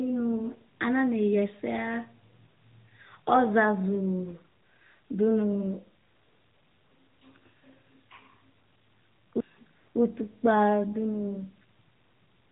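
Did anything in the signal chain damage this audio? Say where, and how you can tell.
Yes, at the codec stage: AMR narrowband mobile codec artefacts run throughout, with nothing above 3.8 kHz and a buzzy, synthetic edge that fits a mid-rate mode near 10 kbps, unlike a plain low-pass filter.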